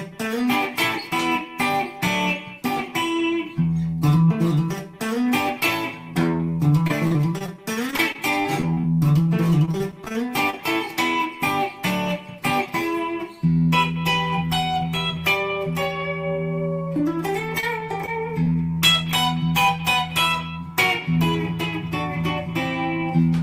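Repeated packet loss (robotic sound) strikes four times: 6.87 to 7.55 s, 7.91 to 8.85 s, 9.65 to 10.55 s, and 17.40 to 18.56 s. Short holes, none longer than about 37 ms, keep opening. Each is patched by stretching the last sound, so the audio turns choppy, with pieces missing.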